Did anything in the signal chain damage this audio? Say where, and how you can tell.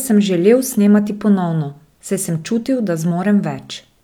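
No, nothing along the signal chain has left any audible damage on this speech recording.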